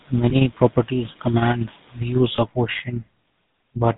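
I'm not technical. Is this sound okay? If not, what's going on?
No, not quite. The whole recording has been through the GSM full-rate codec, the compression used in early mobile phones. It builds the voice from a simple model driven by a regular pulse pattern and throws away everything above 4 kHz, so the speech sounds muffled and buzzy, with a gravelly roughness you can plainly hear the whole way through. It's the classic old cellphone sound.

There are also two brief glitches from lost GSM frames. When a chunk of the signal goes missing, the phone fills the gap by repeating the last good chunk. That gives a quick, rough, metallic ring in place of the real sound. The first is at about 0.30 to 0.33 s, just before "properties command views", and the second is at about 2.36 to 2.39 s, just after "properties command views". Each lasts only about 20 ms, which fits a single dropped block.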